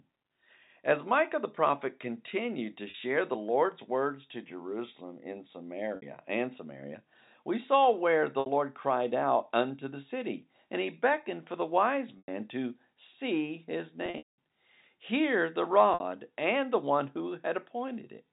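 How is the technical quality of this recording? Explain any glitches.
The recording has repeated dropouts. The telephone-band sound fits G.711 coding, with nothing above 4 kHz.

Packet loss with pitch repetition occurs at 2.90, 5.96, 8.40, 12.18, 14.06 to 14.38 and 15.94 s. Lost audio is bridged by looping the last pitch period. The 40 to 100 ms gaps sound briefly held and buzzy. After "to see his", about 260 ms goes missing over 320 ms and fades toward silence.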